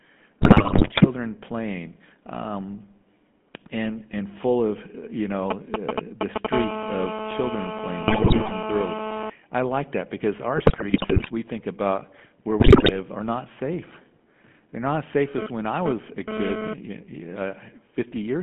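The whole clip is speech carried over the GSM full-rate codec. The voice has the buzzy, gravelly roughness of that coder, and it is plainly audible. The codec models the vocal tract and drives it with a sparse train of regular pulses, so fine detail in the voice is lost. The band runs from about 150 Hz to 3.4 kHz. The sound fits the 13 kbps full-rate coder.

From 0.42 to 1.1 s there are GSM bit errors. Corrupted bits reached the decoder and damaged its filter, pitch and gain values. Frames come out with a bent spectrum or a sudden jump in level. The voice breaks into squawks, pops and gargling. The damage is dense, which points to a badly impaired radio link.

From 5.51 to 6.47 s come GSM signalling bursts. A nearby 2G phone sends short groups of radio bursts while it signals. The audio circuit rectifies them into a galloping dit-dit-dit of brief 217 Hz buzzes. They sit a little above the speech level.

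From 6.53 to 9.3 s a steady GSM phone buzz follows, as the phone enters a call. Its bursts at 217 Hz are rectified into a hard, raspy tone rich in harmonics. The tone is unrelated to the speech and sits about 3 dB below it. Between 8.08 and 8.52 s more bit errors gargle underneath the buzz.

Further bit errors hit from 10.56 to 11.31 s and from 12.6 to 12.99 s. The second burst is short but has the highest error rate.

From 15.38 to 16.74 s the phone buzz returns, this time from a data transfer. It is the same raspy 217 Hz tone, at about 2 dB below the speech.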